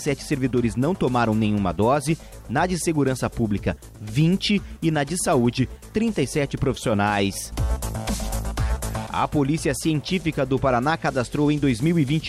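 No technical faults are audible.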